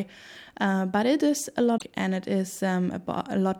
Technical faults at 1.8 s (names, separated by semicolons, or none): damaged data in a compressed stream